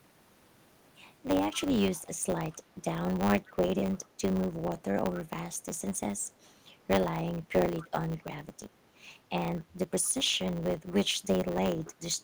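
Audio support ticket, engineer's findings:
Block size mismatch (truncated), throughout: steady 100 Hz buzz; audio runs about 1.07x fast at near-normal pitch. Block tails dropped between stages, fits 512-sample writes. Spectrogram: vertical striations every 10 ms; waveform: step discontinuities at each block boundary.

Echo leak at 1.53–1.61, 1.79–2.08, 2.50–2.84, 3.92–4.08, 7.77–7.85, 8.18–8.23 and 10.04–10.10 s: faint copy of speech 242 ms late, roughly 20–35 dB down. Likely far-end echo canceller residue. Spectrogram: weak duplicate formant traces offset 0.24 s.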